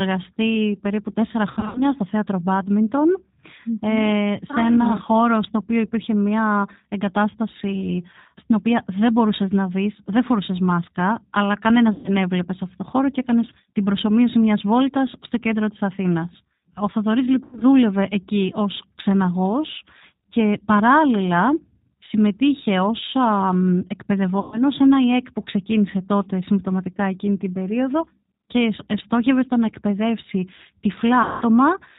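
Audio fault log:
throughout G.729 codec. The speech is coded at 8 kbit/s, which fits G.729A. The decoder rebuilds each short frame from a vocal tract filter, a pitch predictor and a few pulses. Nothing above 4 kHz gets through, and the voice sounds plainly rough and synthetic.
1.51–1.86 s, 11.92–12.10 s, 17.45–17.64 s, 24.40–24.61 s, 31.23–31.42 s VoIP packet loss concealed by the speech codec. Each gap loses 120 or 180 ms of audio. At 1.51 s and 17.45 s the losses are scattered, with runs of up to 60 and 80 ms. The decoder fills the gaps by repeating its last pitch and filter at falling gain. That gives a fading buzzy tone or coloured noise. The speech stays weak briefly after it returns.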